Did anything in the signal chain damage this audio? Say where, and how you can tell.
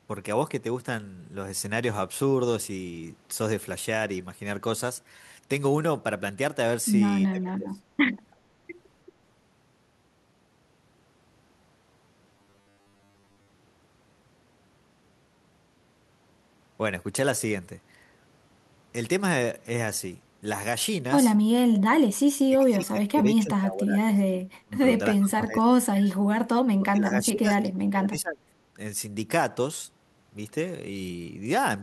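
Yes. Speech suppressed in double talk occurs at 7.28–7.83 s, 22.45–24.24 s, 24.62–24.79 s, 25.16–25.72 s and 26.78–28.54 s. The speech dips by about 25 to 30 dB in pieces. This is call processing, likely an echo canceller ducking the near talker while the far side speaks.

An echo leak at 8.31–8.36 s brings back a faint, delayed copy of the speech, 332 ms late and very quiet. That is about 40 dB below the speech. Call processing is again at fault: the canceller likely left residual loudspeaker pickup in the microphone signal.

Robotic sound from repeated short buffers runs from 12.35 to 13.50 s. A rigid 100 Hz buzz replaces most of that stretch, which fits a 10 ms block being replayed. This points to a driver or buffer stage, likely starved of new audio and looping the last block.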